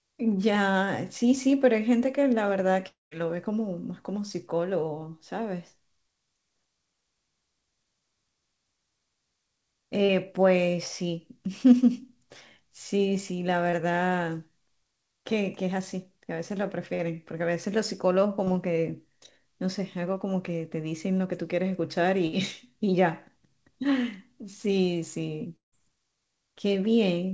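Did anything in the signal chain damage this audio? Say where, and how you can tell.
Yes. Long network dropouts, likely, at 2.88–3.13 s and 25.56–25.74 s: a brief smear fades into flat silence of about 170 ms and 140 ms, a blank gap on the spectrogram.

Short concealed packet loss at 10.05, 13.71, 16.94 and 18.45 s: 20 to 40 ms of smeared, extrapolated sound, seen as short blurred patches where spectrogram detail briefly stops changing.

A burst of packet loss at 22.27–22.34 s: about 60 ms is missing, held as a fading buzz or hiss that shows as a decaying smear on the waveform before the sound resumes further on.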